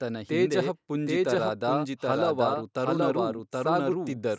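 A doubled audio track runs through the whole clip. Every stretch of speech returns roughly 0.7 s later at about the same loudness, dry and full-band with no decay. This is likely a second, slower capture of the same signal mixed back in.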